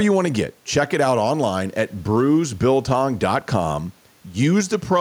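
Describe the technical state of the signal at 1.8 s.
At 1.8 s the speech signal is intact, with no dropout, distortion, or other fault to be heard there.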